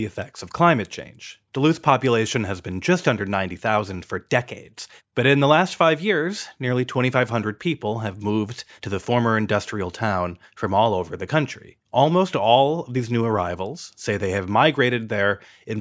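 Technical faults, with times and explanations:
Listening closely to the recording, nothing stood out as a technical problem at any point.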